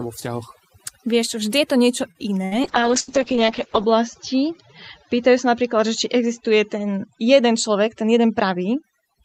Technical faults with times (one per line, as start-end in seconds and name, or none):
0.00-9.25 overdone noise removal
2.11-2.18 short stall from a late packet
2.45-2.54 burst of packet loss
2.69-8.90 call bitrate drop
3.00-3.09 burst of packet loss
8.02-8.65 jitter buffer speed-up